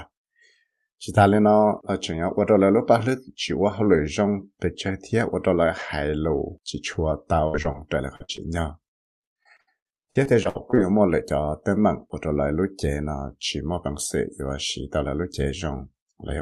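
At 7.47 s a burst of packet loss begins and runs to 7.58 s. About 60 ms of the speech stream never arrived, and the receiver bridged it by extending the last sound for roughly 63 ms while turning it down. It is heard as a held buzz or fading hiss before the speech jumps ahead. On a spectrogram the last sound stretches flat and smears, then dims. The waveform shows the stretched sound shrinking in amplitude before real speech returns.

Short concealed packet loss follows at 7.62 s and 7.72 s, each covering about 20 ms. The audio went missing each time, and the decoder patched it with a continuation of the preceding sound before blending back. Each is heard as a quick smear or wobble. On a spectrogram each shows as a brief vertical seam where the fine detail goes soft.

More short concealed losses fall at 8.16 s (about 40 ms, running to 8.22 s) and 8.37 s (about 20 ms). Between them, from 8.24 to 8.31 s, a second burst of packet loss drops about 40 ms and stretches the prior sound into a buzz or hiss that fades.

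From 8.96 to 10.79 s the clip has repeated packet loss, giving it a robotic sound. There are 15 separate gaps totalling about 0.44 s, and the longest is 63 ms. Roughly a quarter of the stretch is synthetic fill, so the speech turns choppy. A spectrogram shows a run of smeared patches breaking up the speech, and the waveform is ragged with repeated patched stretches.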